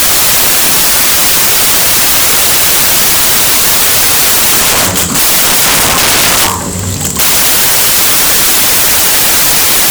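From start to finish the clip suffers from samples built from the wrong bytes. The reader misassembles each sample's bytes, so rapidly changing low-order bits land in the significant positions. The result is loud, harsh broadband noise across the sounds.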